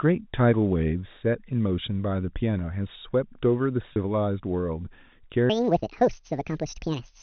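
At 3.93 s the sound briefly freezes into a held, slightly buzzy tone for about 30 ms, then carries on. This is packet loss with pitch repetition: a gap that fits a single lost packet was filled by repeating the last pitch period.

From 5.50 s to the end, the speech turns high and hurried, running 1.68 times too fast and sitting close to ten semitones sharp. This section at the wrong speed was likely played against the wrong clock, so speed and pitch rose together. The narrow telephone band of the G.711 coding stays audible beneath it.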